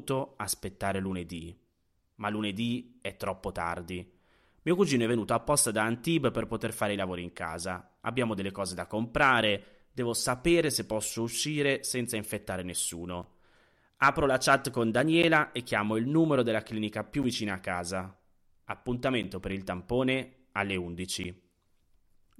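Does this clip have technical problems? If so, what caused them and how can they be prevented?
Yes. From 13.23 s to 21.25 s, after "posso uscire senza infettare", there are periodic USB or driver dropouts every 2.0 s. A background task stalls the audio path, and about five times roughly 10 ms of speech drops to silence, giving regular ticks. The waveform shows brief flat gaps, and the spectrogram shows thin broadband vertical lines. To prevent it, disable USB power saving, raise the driver buffer size, and stop the interfering background process.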